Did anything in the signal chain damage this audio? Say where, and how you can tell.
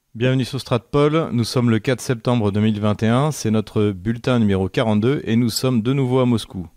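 Yes, at the codec: just after "et nous", 5.52 to 5.58 s holds a short spurious sound, a corrupt frame decoded, with flipped bits misplacing energy across roughly two frames.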